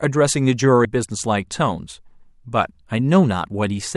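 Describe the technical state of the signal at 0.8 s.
Damaged data in a compressed stream is heard at 0.84 s as a very brief blip lasting only about 14 ms. At that point the compressed speech data is corrupt, so the decoder cannot read the affected frame correctly and produces a short spurious burst instead of the intended signal. It then regains frame sync at the next valid header, and normal decoding resumes immediately afterward.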